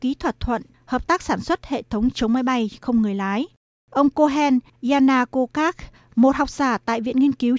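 No technical faults can be heard anywhere in this recording.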